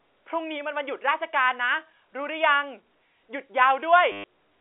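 At 4.12 s the speech breaks into a short robotic stutter lasting 120 ms, to 4.24 s. This is packet loss with the last packet repeated. The receiver replays one chunk over and over. The run buzzes near 100 Hz, which fits 10 ms packets. The telephone band stays narrow throughout.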